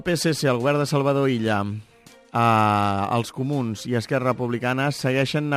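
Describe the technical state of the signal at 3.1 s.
At 3.1 s you're hearing crude rate conversion, and it isn't local: it runs through the entire clip. The error pattern fits a 44.1 kHz to 48 kHz change done by simply repeating the nearest sample instead of filtering. That jagged stepping repeats in a cycle tied to the two rates, throwing off tones unrelated to the material. The result is a gritty, inharmonic fizz sitting about 30 dB under the signal, clinging to louder and brighter parts of the sound.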